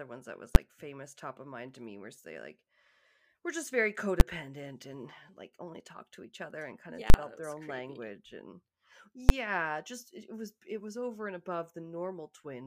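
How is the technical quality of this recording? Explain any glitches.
The speech is marred by four full-scale bursts from invalid numbers. Brief bangs land at 0.55 s (after "ones that was"), 4.2 s and 9.29 s (before "just it was it"), each a 10 ms block. A longer 40 ms burst runs from 7.10 to 7.14 s (after "and kind of yeah"). Each time, a calculation returned infinite or invalid values that clamped to maximum amplitude, so the audio sits flat at one extreme value for the whole block. The short blocks sound like a single loud bang. At 7.10 s there is a pop at each edge with nothing between. A waveform shows flat slabs at one extreme value, far beyond the speech peaks, and a spectrogram shows broadband vertical stripes.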